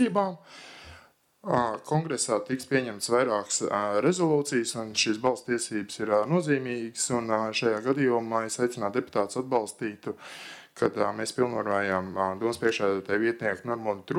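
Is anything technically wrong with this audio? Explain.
No, nothing technically wrong turns up anywhere in this audio.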